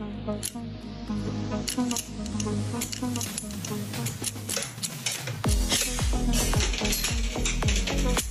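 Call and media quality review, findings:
Doubled audio track, 1.25–5.83 s: full-band copy trails about 1.5 s behind, somewhat quieter, no decay or room colour, cuts in and out abruptly. Likely a second capture path or misaligned edit.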